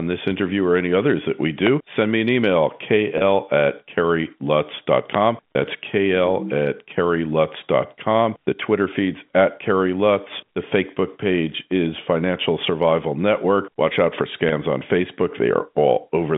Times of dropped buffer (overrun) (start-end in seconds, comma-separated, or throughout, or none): none